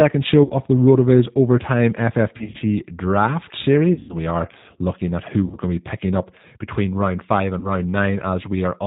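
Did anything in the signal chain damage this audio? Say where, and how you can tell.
Yes. The G.729 codec, at 8 kbit/s, rebuilds the speech from a filter and sparse pulses, so nothing passes above 4 kHz and the whole clip sounds rough and synthetic.

VoIP packet loss concealed by the speech codec occurs at 0.44–0.54, 2.38–2.57, 3.93–4.17, 5.46–5.57 and 7.59–7.68 s. At each gap the decoder stretches its last frame into a fading buzzy tone or coloured noise, and the weakness lingers after packets return.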